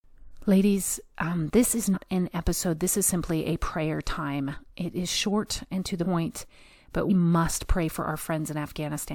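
At 0.30, 1.93, 4.53, 6.02 and 7.08 s the speech lurches forward. These are compressed frames skipped: a few whole frames, which fits a frame length of about 46 ms, never reach playback, so roughly 100 ms of speech vanishes at 0.30 and 4.53 s, about 150 ms at 6.02 s, and about 200 ms at 1.93 and 7.08 s.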